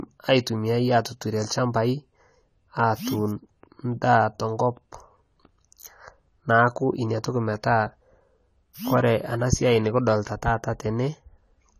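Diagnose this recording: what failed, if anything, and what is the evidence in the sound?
Codec stage: throughout, nothing sounds above 14.1 kHz and sibilants warble and fizz, likely from AAC compression starving bands at a low bitrate. A plain low-pass filter would not warble.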